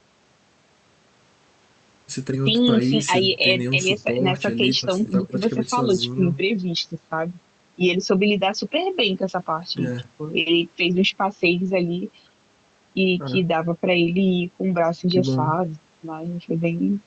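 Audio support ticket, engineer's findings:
No faults found in the speech; the call path shows only the expected codec band limit, with the top end rolling off around 8 kHz, consistent with Opus on a wideband setting.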